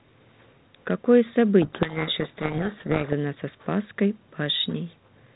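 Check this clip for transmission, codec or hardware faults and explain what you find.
One fault is audible: a codec payload misread, from 1.62 to 3.13 s. The G.726 code words, here at 32 kbit/s, reach the decoder with their bit order swapped. It decodes plausible values from the wrong bits. The speech sinks under harsh, grinding distortion. Clean decoding returns at 3.13 s.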